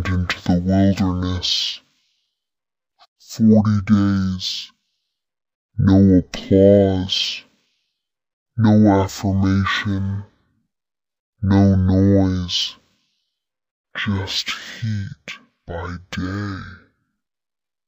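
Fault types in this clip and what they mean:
stereo read as mono: The player has taken a two-channel stream and treated the alternating left and right samples as one continuous channel, so every pair of samples is spent as two consecutive moments instead of one. The whole clip runs at half speed and sits a full octave, 12 semitones, below where it should. On a spectrogram the real content is squeezed into the lower half of the frequency range, with a weaker mirrored copy reflected into the upper half.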